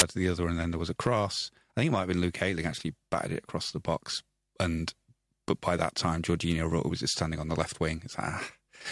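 At 0.0 s, just before "to the other", a hard-edged burst of very loud white noise opens the clip. This is file tags played as audio: an embedded cover picture's compressed bytes were decoded as samples. Lasting only 0.015 s, it is heard as a loud snap.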